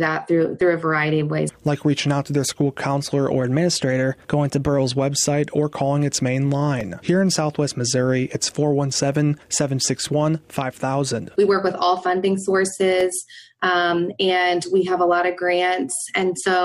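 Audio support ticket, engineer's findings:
Drift correction step, 3.41 to 4.79 s. Playback abruptly runs about 5.7% fast for roughly 1.4 s, pitch raised by about 96 cents, close to a full semitone, then snaps back to normal rate. Likely cause: clock-matching resampler between two devices jumping its rate in one step to drain a filling buffer, instead of trimming gradually. Audible as a sudden sharp detune with rush of timing. Suggest checking resampler rate-adjust smoothing.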